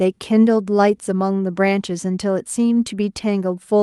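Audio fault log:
Nothing to log here: the speech comes over a call link that carries the light coding texture of its codec and tops out around 12 kHz, which is just how that path normally sounds.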